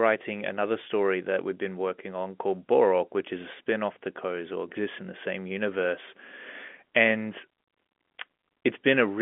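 Nothing goes wrong anywhere in this telephone-band speech.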